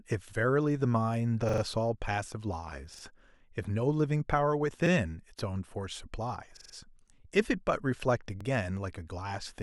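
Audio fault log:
1.49–1.62 s, 2.94–3.03 s, 4.86–4.91 s, 6.57–6.74 s, 8.41–8.45 s: repeated buffer. A stutter of the same 43 ms slice playing again one to four extra times with hard joins. Replacement audio arrived late, so the last block was reused; this fits a 2048-sample buffer.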